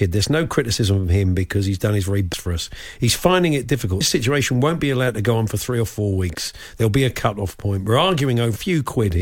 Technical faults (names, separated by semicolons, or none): compressed frames skipped